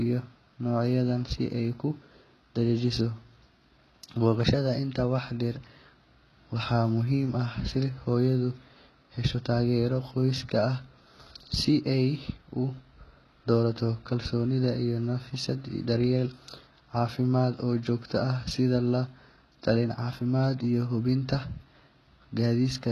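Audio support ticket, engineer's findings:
Treble on the speech sounds synthetic the whole way through, with nothing above 12.3 kHz. Sibilants gritty and lispy, top end present but not lined up with the harmonics below it. Heavy codec damage, likely HE-AAC compression: lower band coded, treble rebuilt by copying lower bands upward under a rough envelope. Damage level points to a very low bitrate, around 16 kbps, probably the v2 flavour.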